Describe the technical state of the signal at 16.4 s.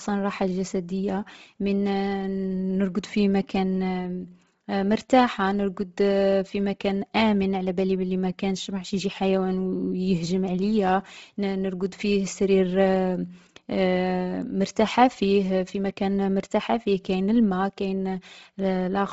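At 16.4 s the speech carries heavy damage present throughout, likely Bluetooth LC3 compression. Working in 7.5 ms frames at a rate fitting 24 kbps, it drops upper-spectrum detail and fills gaps with noise, so nothing exceeds 7.7 kHz and the sound turns breathy and grainy.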